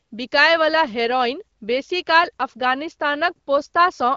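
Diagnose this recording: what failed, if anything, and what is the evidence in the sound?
Nothing has gone wrong: the speech sounds like a wideband phone call through the AMR wideband (HD Voice) codec, with nothing above about 7.4 kHz and a light coding texture that fits a rate around 12.65 kbit/s.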